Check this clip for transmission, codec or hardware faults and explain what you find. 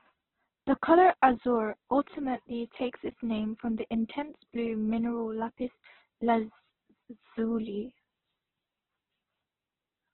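There's one codec problem, and it runs the whole way through. Throughout, there's Opus compression, likely squeezed to around 8 kbps: everything stops near 4.1 kHz, and noise-filled bands leave the speech rough and grainy.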